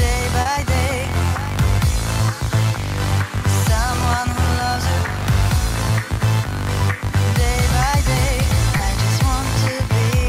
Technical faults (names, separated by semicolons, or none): short concealed packet loss